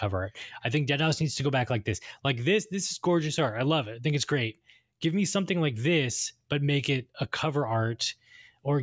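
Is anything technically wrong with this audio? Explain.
No, nothing technically wrong stood out on listening to this speech recording.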